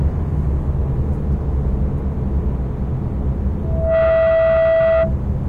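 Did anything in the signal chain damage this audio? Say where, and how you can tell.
Yes. Loudspeaker feedback squeal: from 3.63 to 5.15 s a microphone re-amplifies its own loudspeaker, so a 654 Hz tone swells within about a third of a second to sit a few dB above the sound.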